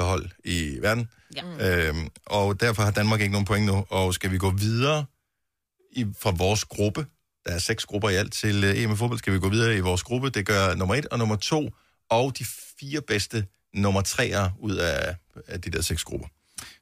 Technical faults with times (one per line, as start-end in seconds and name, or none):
none